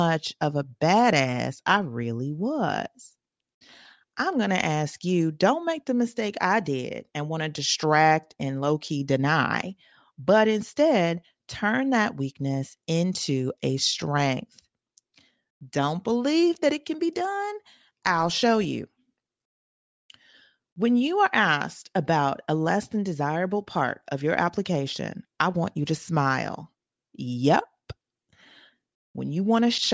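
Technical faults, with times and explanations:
No technical faults can be heard anywhere in the speech; the signal stays continuous and steady at a consistent level.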